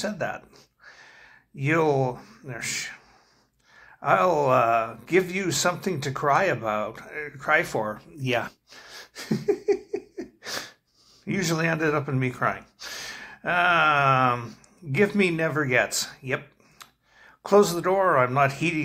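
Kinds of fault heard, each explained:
Skip ahead: At 8.47 s the audio jumps forward with no gap and no fill, because roughly a second of sound was dropped while later audio was already waiting, and playback carried on from the later material. The two sides of the cut are joined directly, so the delay shrinks suddenly. Unlike a dropout, nothing is replaced by silence or noise. The sound simply lurches onward, with the missing second never heard.
Jitter buffer speed-up: From 11.38 s to 12.43 s the receiver trimmed a backlog by repeatedly cutting out short pitch-period-sized pieces, removing about a tenth of a second in total. The sound runs at 108% of normal speed and feels hurried. Pitch stays where it was, which separates this from a resampling or clock fault, where faster playback would also raise the pitch. It is gradual, not a single jump as at the skip.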